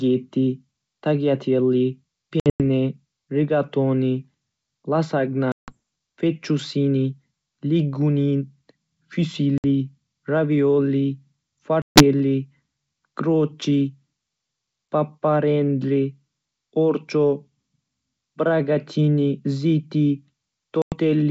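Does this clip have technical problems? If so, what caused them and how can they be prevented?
Yes. Packet loss on an ADPCM call leaves hard-edged silent gaps at 2.40 to 2.61 s (160 ms missing in several pieces), 5.52 to 5.77 s, 9.58 to 9.64 s, 11.82 to 12.03 s and 20.82 to 20.94 s. On a waveform these appear as flat-line holes with abrupt edges, and on a spectrogram as blank vertical stripes. After each gap the decoder's predictor and step size no longer match the sender's, so the speech comes back with brief slight distortion before settling. Jitter buffering, forward error correction and loss concealment that resynchronises the decoder state would prevent this.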